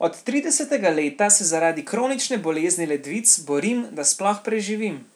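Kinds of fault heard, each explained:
Pre-emphasis left on, from 1.30 s to the end: the upper frequencies were lifted before storage, and the complementary de-emphasis was never applied on playback. The treble therefore stays about 8 dB above 1 kHz at 10 kHz, a shape that fits the CD 50/15 µs curve. From 1.30 s onward the speech turns thinner and brighter, with sibilants hissing and edgy where the opening second sounds fuller.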